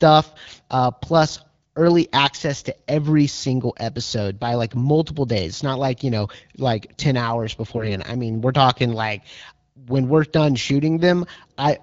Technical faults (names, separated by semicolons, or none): AMR bit errors